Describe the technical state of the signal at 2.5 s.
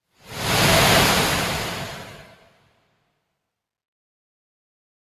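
At 2.5 s the signal sits inside a stretch of sound cut by the noise suppressor, running from 2.23 to 2.79 s. Across that span the suppressor classed the material as noise and attenuated it harder than its surroundings, with the deepest drop reaching about 12 dB. Together the affected portion adds up to roughly half a second. Sustained and decaying content loses level and has its tail shortened, while any sharp onsets pass largely intact, so the passage sounds hollowed out and pulled back.

That dip sits on top of a noise suppressor applied to music or sounds that runs through the whole clip. A speech-oriented suppressor remains active and keeps treating steady tones, ambience and reverberant tails as noise, pulling them down by something like 5 dB as its gain moves. Transients get through while held material sinks, giving a continuous pumping, fluttering and thinned quality. Around 2.5 s this background gain movement compounds the deeper local cut.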